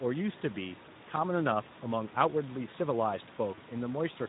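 From the start, the speech carries Speex codec damage: a hoarse, grainy roughness, with the room noise about 21 dB below it. The sparse excitation fits an 11 kbps setting. On a spectrogram, the harmonics look smeared and speckled with noise rather than cleanly striated.

At 1.63–1.66 s and again at 3.55–3.60 s, VoIP packet loss concealed by the speech codec briefly stretches the sound out as it fades. Each gap points to a single lost 20 ms frame. The decoder repeated its last pitch and filter while lowering the gain. The spectrogram shows frozen harmonics that dim, and the waveform shows a repeating cycle shrinking in amplitude.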